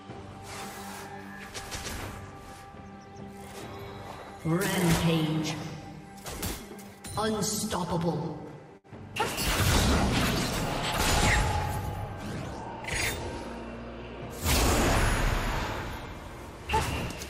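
A burst of packet loss occurs from 8.77 to 8.87 s. The receiver conceals it by extending the last sound for 64 ms while fading it down, then resumes playback further on. About 60 ms of audio is missing across the gap.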